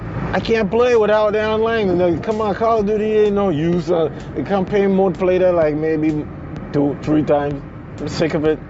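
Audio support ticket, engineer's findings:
Nothing to flag here: it's the normal sound of a call mic chain and an Opus call path, with the top end stopping around 8 kHz as you'd expect from a wideband call setting.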